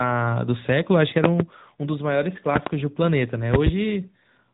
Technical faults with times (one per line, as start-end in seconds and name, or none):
0.00-4.53 AMR narrowband mobile codec